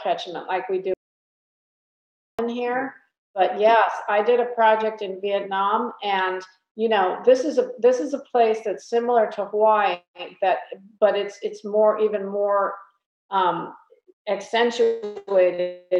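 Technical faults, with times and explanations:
0.94–2.39 s, audio dropout to silence: the input feed was likely lost for about 1.45 s, perhaps through a dropped connection or a momentary mute, while recording carried on writing silence. The sound cuts off abruptly into total silence with no room tone, then resumes mid-flow.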